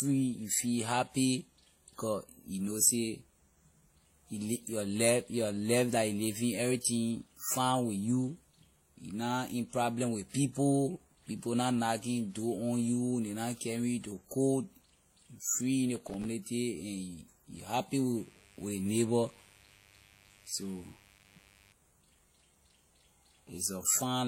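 Right through the speech there's a layered, smeary quality, with the artefacts of one codec sitting on top of another's, and nothing at all above 16.2 kHz. That's likely transcoding between lossy codecs: the mix of artefacts fits something like a WMA encode at around 48 kbit/s that was later squeezed into HE-AAC at about 32 kbit/s. The second encoder wastes bits reproducing the first one's damage, so both sets of flaws end up audible together.

From 15.96 to 16.25 s you get processor overload crackle. It's a quick gritty tear where the machine kept missing its deadlines for very short buffers, a few milliseconds each, and a string of them dropped out to silence. Each gap has hard edges, which is what gives it that crackly, torn texture over the speech.

Right after "you happy", at 18.18 s, a mains buzz comes in and runs to 21.73 s. It's a steady, raspy 50 Hz hum with sharp harmonics reaching well up the spectrum, sitting roughly 30 dB under the speech. 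That's typical of switching spikes from a dimmer, a rectifier or poor shielding.

While that buzz is still going, the processor overload crackle comes back from 20.93 to 21.41 s. It's the same run of tiny silent dropouts from missed buffers, so for about half a second you hear the tearing crackle riding on top of the hum.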